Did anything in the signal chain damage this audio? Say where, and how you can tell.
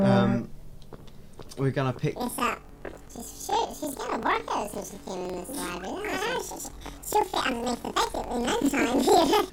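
Yes: planar audio read as interleaved at sample-format conversion, from 2.16 s on. The sound jumps an octave with a 23.4 Hz flutter; spectrograms show doubled harmonics and seams every 42.67 ms, fitting 2048-sample blocks.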